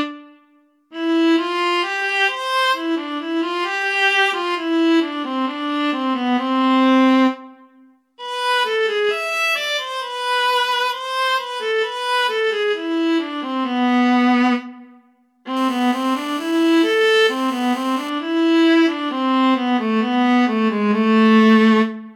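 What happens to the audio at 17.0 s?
GSM phone buzz, 15.57 to 18.10 s: an audio circuit rectifying a nearby 2G phone's transmit bursts produces a steady, raspy 217 Hz buzz.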